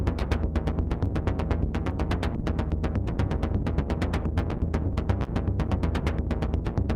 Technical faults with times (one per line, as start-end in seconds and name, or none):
0.00-6.95 clock drift between sender and receiver
5.24-5.30 short stall from a late packet